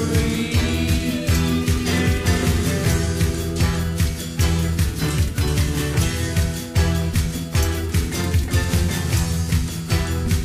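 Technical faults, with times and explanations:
0.84–0.88 s and 3.02–3.08 s, damaged data in a compressed stream: two short bursts, about 40 ms and 54 ms long, where the sound breaks into a brief glitch. A stretch of the compressed data is bad there, so the decoder can't make sense of those frames, loses its place, and has to hunt for the next valid frame header before it can carry on. The garbled output in between is what you hear as the glitch.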